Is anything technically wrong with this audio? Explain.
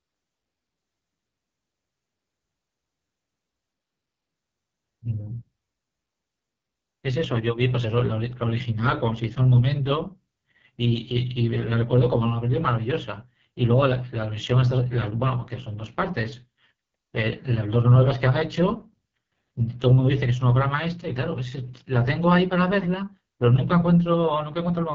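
Yes. The whole clip has gone through the AMR wideband (HD Voice) codec, and it sounds like one of its lowest rates, which fits the 6.6 kbit/s mode. Nothing gets through above about 7.4 kHz. The codec rebuilds the speech from a pulse-excited vocal tract model up to 6.4 kHz and papers over the top band with shaped noise. At a rate this low the model is starved, so the voice comes out heavily damaged: rough, raspy and grainy throughout.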